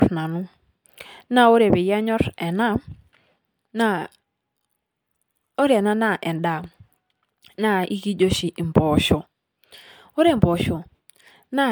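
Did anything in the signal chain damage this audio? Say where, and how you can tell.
Yes. The damage sits at the codec stage and runs through the whole speech clip: it was likely encoded to MP3 and decoded again about five times over, each pass requantising on a shifted frame grid so the errors pile up. The bandwidth still reaches 20.1 kHz, which points to rates near 150 kbit/s, yet the speech sounds swirly, smeared and hollow, with softened consonant attacks, far worse than one encode at that rate would leave. That mismatch marks generation loss.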